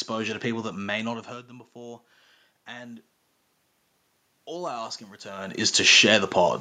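From 4.46 to 6.01 s there's automatic gain rising. The input dropped by about 16 dB, so the gain control slowly pushed its gain up by about 6 dB. You hear the speech and the room noise swell together over that second and a half.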